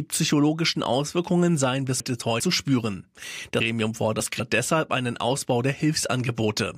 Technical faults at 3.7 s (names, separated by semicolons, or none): chunks out of order